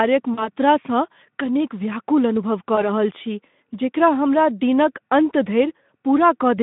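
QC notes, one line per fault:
0.33 to 0.48 s, VoIP packet loss concealed by the speech codec: about 40 ms of audio goes missing, which fits two 20 ms frames. The decoder keeps extending its last pitch and filter at falling gain, so the sound smears into a short stretched, fading tone or noise and sounds thin for a moment after real data resumes, since each frame leans on the one before.
2.76 to 2.87 s, VoIP packet loss concealed by the speech codec: a single 20 ms gap. It gets the same treatment from the Speex decoder, with a brief stretched sound that dies away and a weak recovery. It's shorter than the first, heard against the 150 Hz to 3.6 kHz telephone-style band.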